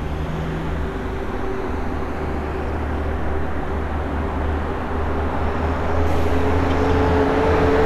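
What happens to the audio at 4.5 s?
Nothing goes wrong at 4.5 s: the everyday sound carries straight through that moment with no fault.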